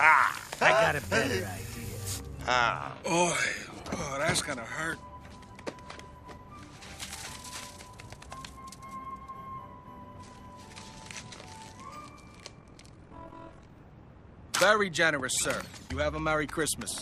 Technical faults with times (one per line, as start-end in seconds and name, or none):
12.59-13.74 overlap-add ripple